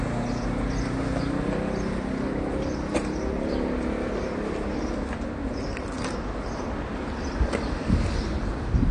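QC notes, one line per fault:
Throughout, AAC compression: likely a low-bitrate AAC-LC encode, around 32 kbps, cutting everything above 9.9 kHz, so the audio sounds dull and plainly smeared.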